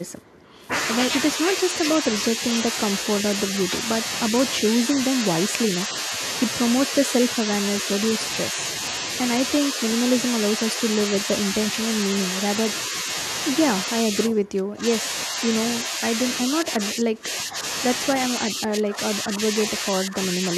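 An echo canceller likely caught in double talk turns this speech down in patches, from a slight dip to a deep cut, at 0.19–0.61, 1.36–3.73, 4.77–6.12, 6.88–9.06, 12.89–13.07, 14.02–17.63 and 18.3–20.48 s: speech suppressed in double talk.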